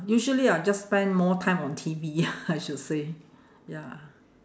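Nothing in this speech recording stands out as a technical problem; there's nothing here to flag.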